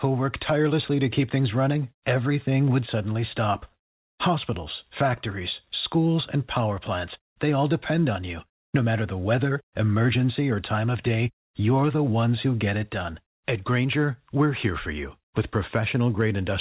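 No faults to report in the speech; the band stops at 4 kHz, consistent with the narrowband telephone coding of a normal call path such as G.711 mu-law.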